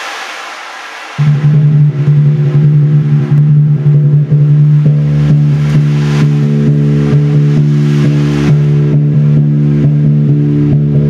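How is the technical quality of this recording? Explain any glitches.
The recording suffers from gain pumping throughout: the level ducks by around 10 dB under loud sounds, likely a fast limiter fighting input gain set far too high, leaving everything squashed.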